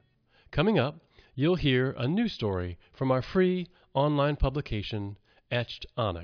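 Nothing in the recording stood out on listening.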